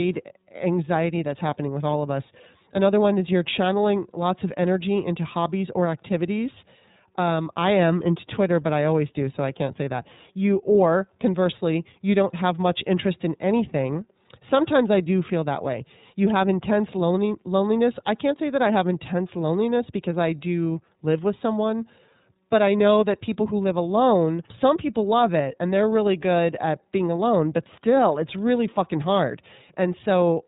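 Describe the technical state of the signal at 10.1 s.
At 10.1 s the speech carries iLBC codec damage, present for the whole clip. Each 30 ms frame is coded on its own, and nothing above 3.8 kHz survives. The sound is narrowband, a little rough and synthetic, which fits iLBC's 13.33 kbps mode.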